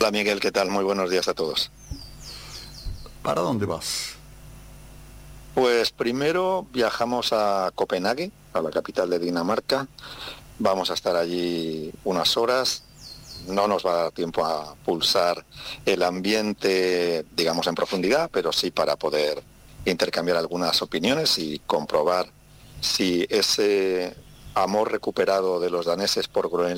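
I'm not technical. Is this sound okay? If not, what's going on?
Yes, this sound is fine, with nothing going wrong anywhere in it, so there's nothing here to worry about.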